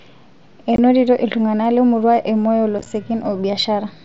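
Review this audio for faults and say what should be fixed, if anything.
Unconcealed Bluetooth headset packet loss: the headset-to-phone link dropped voice packets and filled them with silence or an idle pattern. This leaves an abrupt 22.5 ms hole at 0.76 to 0.79 s and brief, crackly chops scattered across 2.79 to 2.86 s.

A stronger radio link and packet loss concealment in the receiver would prevent this.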